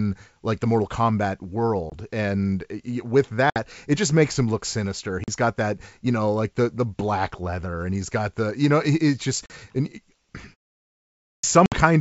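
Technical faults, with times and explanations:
1.90–1.93 s, 3.50–3.63 s, 5.24–5.29 s, 9.46–9.51 s and 11.66–11.75 s, packet loss on an ADPCM call: hard-edged silent holes of 20 to 60 ms, consistent with one to three 20 ms packets going missing. The gap at 3.50 s falls just before "it just makes him", the one at 5.24 s sits between "makes him look sinister" and "got that you know", and the one at 9.46 s follows "you know it's just". ADPCM codes each sample as a difference from a prediction, so the missing packets leave the decoder's predictor and step size out of step with the sender's. Speech resumes slightly distorted until the two sides converge again.
11.18–11.44 s, clipped start after a pause: after about 0.71 s of silence, roughly 255 ms of the next phrase is swallowed, so the speech starts abruptly without its opening sounds. This fits an output device that powered down or lost lock during the pause and needed that time to wake before passing audio again.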